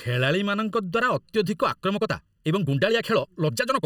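Throughout the speech, channel delay (comb filtering) leaves the sound hollow and phasey: one channel arrives roughly 0.7 ms late, and summing to mono cancels energy near 700 Hz and then at evenly spaced intervals above. On a spectrogram these appear as fixed, dark horizontal bands.

From 1.68 s to the end, the pace jumps to about 1.51 times faster while the pitch stays put, sounding rushed. This is likely a time-stretched section that dropped short pieces. The waveform shows compressed syllables with small discontinuities at the splices.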